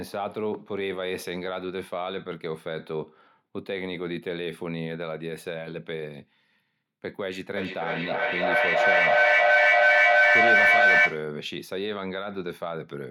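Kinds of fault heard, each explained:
Feedback echo between two devices: The speech returns roughly every third of a second and piles up to about 12 dB louder, because a second device replays it into the microphone.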